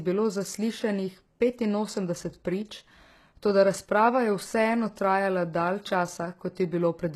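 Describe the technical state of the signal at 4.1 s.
At 4.1 s the speech carries the low-bitrate audio saved at a high bitrate fault, present across the whole clip. The high-bitrate MP3 encoding cannot restore what an earlier very low-bitrate pass stripped out, which likely explains the sound here: smeared, swirly speech with a dull top end, fitting something like HE-AAC near 16 kbit/s. A spectrogram shows a hard ceiling where the high frequencies should be, with patchy, blocky texture below it, while the waveform looks normal.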